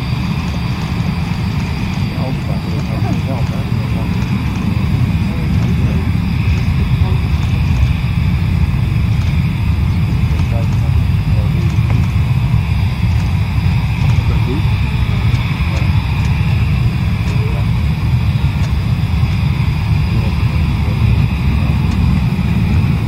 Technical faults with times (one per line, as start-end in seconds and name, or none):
0.00-2.04 doubled audio track